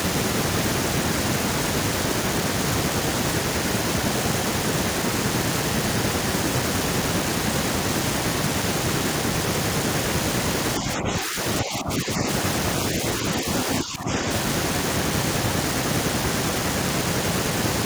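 Speech briefly ducks, by roughly 5 to 15 dB, at 10.8–11.38, 11.63–12.2, 13.42–13.47 and 13.66–14.27 s. This is speech suppressed in double talk, likely from an echo canceller muting overlapping talk.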